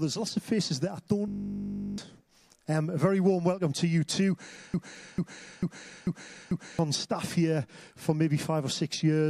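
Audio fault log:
1.28–1.98 s, system hang loop: the computer or driver froze while the sound hardware kept replaying one 20 ms stretch of its ring buffer, 35 times at 50 Hz. That short cycle fuses into a steady buzz, and about 0.7 s of audio is lost.
4.74–6.79 s, broken-record loop: the player, encoder or stream likely stalled and kept resending the last fragment it held, a 0.44 s piece repeated exactly, five times back to back. It stutters like a stuck record, and the audio due in that time never plays.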